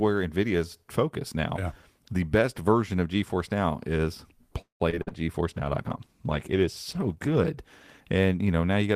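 From 4.61 to 5.13 s, repeated packet loss (robotic sound) breaks the speech into four gaps, the longest about 187 ms. The decoder stretches the last sound across more than half of this stretch, giving a choppy texture with short pieces dropped out entirely.

From 5.45 to 7.53 s, a call bitrate drop leaves the speech rough, watery and dull for about 2 s. The coarser coding and lost high-frequency detail fit the encoder being throttled from 32 to 15 kbps before it recovers.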